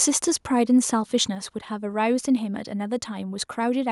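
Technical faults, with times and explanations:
1.35 s, microphone volume stepped down: the speech and the background behind it both drop by about 4 dB in one abrupt step and stay there. That's likely the call software trimming the mic's input volume after deciding the level was running too hot.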